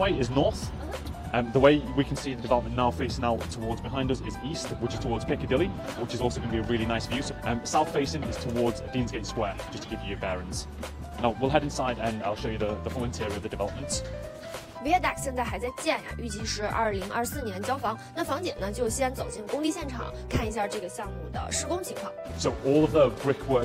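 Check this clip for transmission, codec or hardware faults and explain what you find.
Nothing audible points to a transmission, codec or hardware fault anywhere in the clip.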